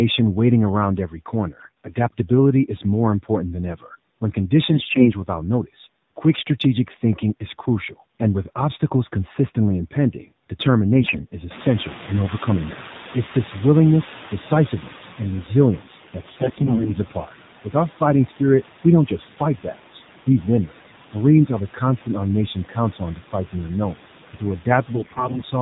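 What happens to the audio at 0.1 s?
Noise suppressor artifacts are present at 0.1 s and throughout: frame-by-frame band gating pulls steady noise down by about 12 dB, so the noise sinks between words and rises under them. The AMR narrowband mobile codec also runs from the start, at 7.4 kbps, which cuts everything above 4 kHz and makes the speech plainly buzzy and synthetic.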